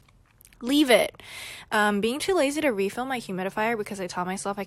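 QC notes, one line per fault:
1.28 s, overlap between stream segments: there's a quick click or tiny skip in the speech right here. It sounds like two chunks of the stream claimed the same stretch of time, so the player trimmed the overlap even though that audio wasn't actually duplicated. About 6 ms of real signal went missing, and the waveform jumps across the gap. It happens only once in this clip.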